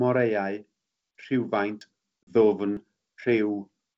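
At 1.81 s the speech skips forward: a short slice, around 40 ms, drops out and the sound on either side butts together with no silence. This is audio missing between chunks, likely from a recorder or processor handling the stream in one-second blocks and losing a sliver each time it closes one block and starts the next.

From 2.23 to 2.33 s comes a hard-edged hole of about 40 ms, the length of a couple of packets, and the speech comes back slightly distorted before settling. This is packet loss on an ADPCM call. The missing packets were filled with silence, and the receiver's adaptive predictor and step size no longer matched the sender's, so the first few tens of milliseconds after the gap decode imperfectly until the two sides fall back in step. The wideband sound around it, clear up to about 7 kHz, fits G.722 at 64 kbit/s.

At 2.77 s the same chunk-boundary skip returns. Again about 40 ms vanishes with the two sides spliced straight together, close to a second after the first skip, matching the regular block spacing.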